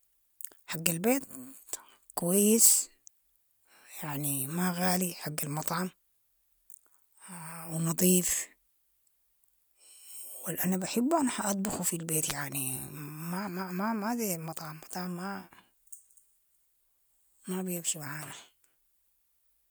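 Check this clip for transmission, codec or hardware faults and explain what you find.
One fault is present: a wireless microphone noise hit from 12.28 to 12.33 s, just after "بحبهم حاطبخو في البيت". It sounds like a brief swish of static, about 50 ms long. The analogue FM radio link faded as reflected signals cancelled, letting receiver noise rise.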